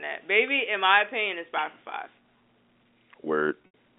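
At 3.66 to 3.68 s, near the end of the speech, there is packet loss with pitch repetition. Packets went missing, and the receiver filled each gap by repeating the last pitch period. About 100 ms of audio is lost, scattered over 180 ms. That fits roughly five 20 ms packets. The longest run is 80 ms, long enough for the repeated period to fade out. Brief held, buzzy tones break the flow, across the telephone band of 250 Hz to 3.5 kHz.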